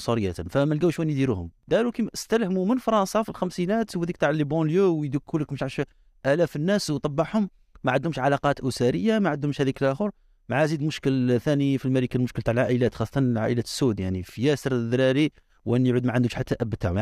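No technical faults can be heard at any point in this speech recording, so there is nothing to describe in time order.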